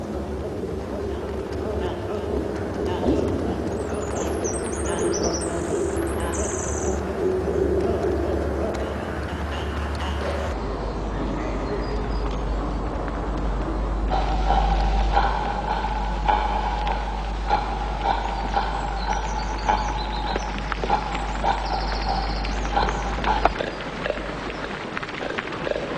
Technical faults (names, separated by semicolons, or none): wrong sample rate